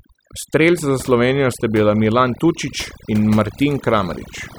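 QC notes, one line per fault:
throughout, overdone noise removal: the background drops and breaks up into twinkling specks. A noise reduction stage set far too hard is cutting individual frequency bands whenever they sit close to its noise estimate, taking the quieter parts of the speech along with the noise.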